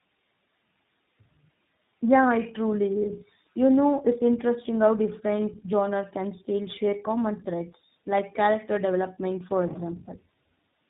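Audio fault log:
throughout, tandem speech coding: the speech passed through two low-rate speech coders in a row, with the character of a GSM full-rate stage and then an iLBC stage joined by a plain telephone-grade link. Each coder re-encoded the previous one's already lossy output, so their errors stacked. The result is rougher, more muffled and more warbly than either coder alone, with nothing above about 3.8 kHz.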